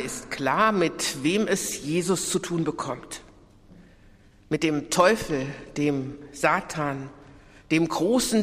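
No technical faults are audible.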